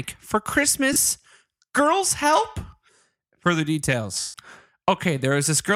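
Lost LE Audio frames at 0.93 to 0.96 s and 4.20 to 4.34 s: the LC3 decoder refilled the gaps from the last good spectrum with randomised signs. The speech turns into a brief noisy smear for 30 ms, then a 140 ms stretch that fades away.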